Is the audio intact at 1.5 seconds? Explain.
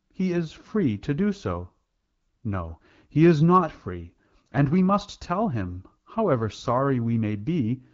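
Yes, at 1.5 seconds the speech comes through intact, with no fault at that moment, only the light, clear coding you would expect from AMR wideband (HD Voice) at 12.65 kbit/s.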